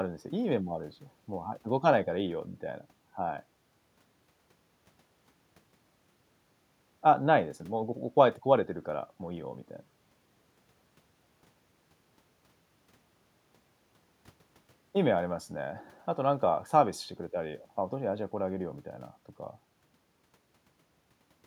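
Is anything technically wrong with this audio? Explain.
No technical faults are audible.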